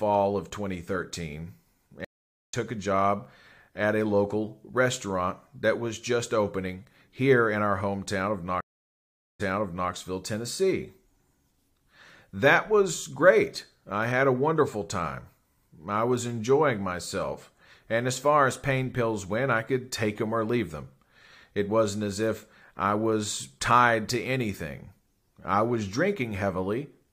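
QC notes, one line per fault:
2.05–2.54 s and 8.61–9.91 s, stream reconnect: the connection dropped and a new decoder restarted mid-stream. First, 0.48 s of silence, resuming about half a second later; second, 0.79 s, resuming 0.51 s earlier as a resent burst repeats. Each return briefly fades in.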